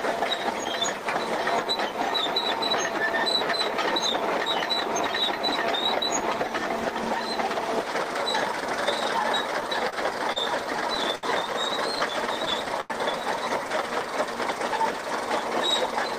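At 9.90 to 9.94 s a packet was late and the jitter buffer ran dry, causing a short stall from a late packet. The receiver held the last sound for 29 ms until the data turned up, then carried on from the same point. Nothing is lost, but the playout delay grows by 29 ms, and the sound lingers a moment too long with a faint buzzy smear.

From 10.32 to 11.25 s and again from 11.99 to 12.92 s, packets kept arriving late, and the buffer emptied over and over. This produced repeated stalls, a stutter. The first burst has six gaps totalling 144 ms, the longest 74 ms. The second has seven gaps totalling 148 ms, the longest 92 ms. About a sixth of each span is stretched-out filler, with the longer holds fading. Little is missing, but the audio drags and hiccups through both stretches.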